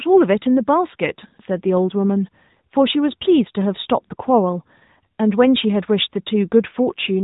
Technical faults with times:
0.00-7.24 AMR narrowband mobile codec

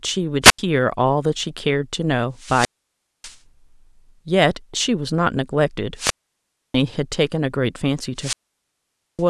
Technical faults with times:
0.42-0.59 wireless microphone squelch dropout
2.37-3.38 wireless microphone squelch dropout
5.95-6.75 wireless microphone squelch dropout
8.15-9.24 wireless microphone squelch dropout

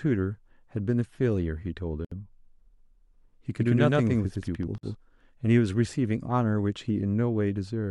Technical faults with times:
2.05-2.11 gap at a join of encoded pieces
3.60-4.95 doubled audio track
4.78-4.83 gap at a join of encoded pieces

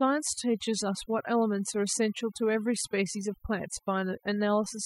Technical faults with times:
0.00-4.85 overdone noise removal

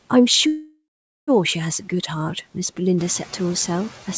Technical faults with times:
0.00-4.17 noise suppressor artifacts
0.47-1.30 call audio freeze

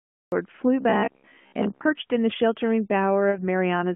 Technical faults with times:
0.00-0.32 cut-off start
3.30-3.39 lost AMR speech frames

